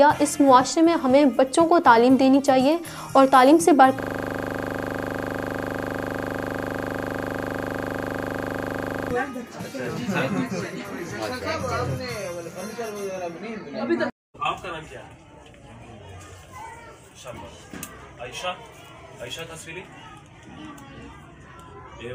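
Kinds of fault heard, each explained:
System hang loop: from 4.0 to 9.11 s the system froze while the audio hardware kept replaying one 40 ms stretch of its ring buffer, repeating it over a hundred times into a rigid, buzzing stutter at 25 Hz before normal sound resumes.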